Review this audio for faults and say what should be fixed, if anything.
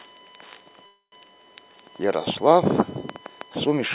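USB whine runs throughout as a fixed 1 kHz tone with harmonics, strongest at 3 kHz and roughly 30 dB below the speech. On a spectrogram it shows as thin, unbroken horizontal lines. Powering the interface separately or adding a USB isolator would prevent it.

A call audio freeze lasts from 0.86 to 1.14 s, likely caused by delayed packets emptying the jitter buffer. A fading buzz or hiss covers the gap, then about 130 ms of near-silence. The waveform shows a decaying tail flattening out, after which the speech resumes intact but 260 ms late. A steadier network connection or a larger adaptive jitter buffer would prevent it.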